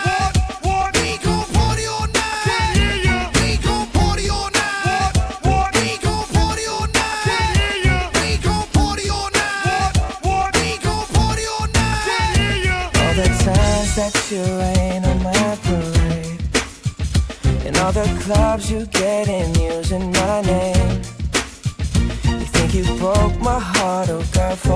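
Nothing in the audio stood out as a technical problem on listening.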